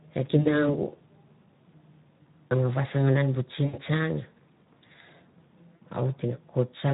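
Right from the start the whole clip carries Speex codec damage, and it's plainly audible: the speech has a hoarse, grainy edge, because a CELP coder running this lean doesn't have many bits for the excitation, so the fine detail of the voice gets swapped for coarse approximations. The texture fits a rate around 11 kbps.

On top of that there's VoIP packet loss concealed by the speech codec, three times. From 0.39 to 0.69 s about 60 ms of audio went missing, and the decoder papered over it by repeating its last pitch and vocal-tract shape at dropping gain. That gives a short smear of stretched sound that fades, and the speech stays weak for a moment after real packets return. The same happens from 3.65 to 3.76 s, right after "an bu", where roughly 80 ms is gone. Then around 5.76 to 5.79 s there's another 60 ms dropout with the same fading fill.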